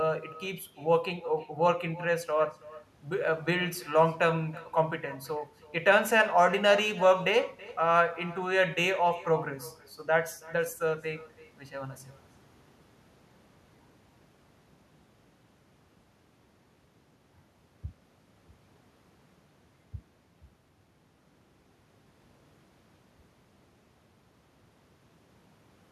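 Throughout, each phrase returns around 300 ms later as a thin copy about 20 dB down: echo with no canceller, the far-end loudspeaker feeding its microphone.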